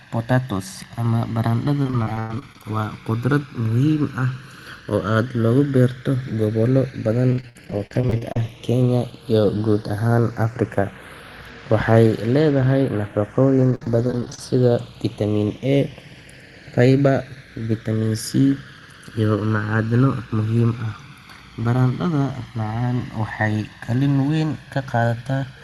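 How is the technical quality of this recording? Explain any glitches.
The recording has two clear faults: a slow flanging caused by the stereo channels drifting apart, and three bursts of choppy, robotic speech from repeated packet loss. It passed through a call codec, whose top end stops near 12 kHz.

Channels drifting apart runs through the whole clip. The left and right channels were captured on devices with slightly different clocks, roughly 100 parts per million apart. The delay between the channels therefore grows steadily and reaches around 1.5 ms by the end. When the channels are summed to mono, the resulting comb-filter notches slide slowly through the spectrum. That sweep is heard as a slow, gradually moving flanging on the speech.

Repeated packet loss (robotic sound) occurs at 1.82–2.65 s, 7.31–8.36 s and 13.71–14.39 s. In each stretch, audio packets were lost or arrived late in quick succession. 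The receiver covered each hole by extending the last sound it had, and the next hole arrived before the speech could recover. Concealment fills about a quarter to a third of each span. The longest holes are 99 ms, 59 ms and 56 ms. The result is choppy, robotic speech with fragments missing.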